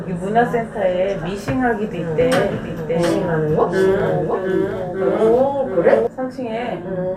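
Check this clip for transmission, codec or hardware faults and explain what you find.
There's one fault here: a doubled audio track from 2.21 s to 6.07 s. A second, full-band copy of the sound trails the original by around 0.7 s, a few dB quieter, most likely from a slower capture path picking it up again. It has no decay or room colour, and it cuts in and out abruptly.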